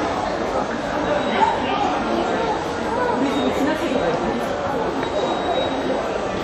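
WMA compression, throughout: the sound is ringing and washy, with a hiss that swells and fades along with the signal and nothing above 16.2 kHz. This likely comes from a transform codec smearing quantisation noise across long blocks, which fits a bitrate around 48 kbps.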